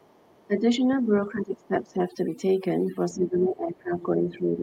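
Overdone noise removal runs through the whole speech clip. The background has dropped and breaks up into twinkling specks. A noise reducer set too hard has pulled individual frequency bands down whenever they came close to its noise estimate, taking quiet parts of the voice with them. Unlike a simple low-pass or bandwidth limit, the loss flickers band by band rather than cutting cleanly at one frequency.

From the start to 0.47 s, and again briefly from 1.59 to 1.67 s, a second, much fainter voice can be heard under the main one, roughly 35 dB down. This is other side's voice leaking through, likely a loudspeaker echo the echo canceller failed to remove from the microphone. It is a separate talker, not a delayed copy of the main voice, so it is not room reverberation.

From 0.47 to 0.84 s the main voice dips by about 10 dB, for a fifth of a second or so in total. From 1.02 to 1.99 s it drops by up to about 15 dB, losing around 0.7 s in patches. 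From 3.13 s to the end it dips again by up to about 15 dB. This is speech suppressed in double talk, likely the echo canceller turning everything down while both sides spoke at once. What sets these dips apart from the constant noise-removal damage is their timing: they come and go in chunks, clustered around the stretches where the other side is also talking.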